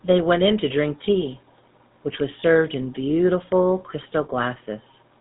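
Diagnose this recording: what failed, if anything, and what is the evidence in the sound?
The speech sounds buzzy and gravelly throughout, with nothing above 4 kHz. That points to the GSM full-rate codec, probably 13 kbps, with its pulse-driven vocal-tract model.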